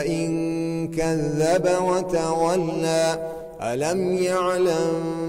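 No audible technical faults.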